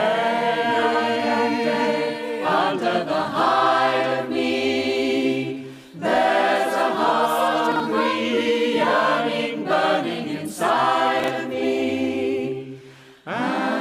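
A 40 ms chunk arrived one slot late and played after its successor, causing chunks out of order at 7.72–7.80 s and 11.20–11.28 s. Each is heard as a brief jumbled stutter.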